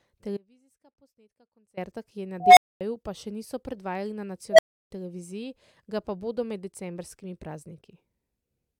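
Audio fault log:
0.37–1.77 s, audio dropout to a faint residue: the speech drops out abruptly for about 1.4 s and comes back right on "ki je na". The gap isn't dead silence, though; there's a faint trace of sound sitting roughly 25 dB under the normal level, so the path downstream stayed live while the wanted signal went missing. That's most likely a brief loss of the source feed rather than anything in the later chain, and the hard edges make it clearly different from a natural pause or fade.
2.40–2.81 s and 4.51–4.91 s, unstable filter: twice a tone of about 700 Hz swells up and runs away, once after "ki je na" and once after "še niso predvajali na". The first builds over about 170 ms, the second faster at about 80 ms, both growing until they clip hard. Then the output collapses into silence, about 240 ms the first time and 320 ms the second, before speech resumes at "pa še niso predvajali" and "televiziji ga pa bodo". 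That's a recursive filter with bad coefficients blowing up, overflowing, and resetting.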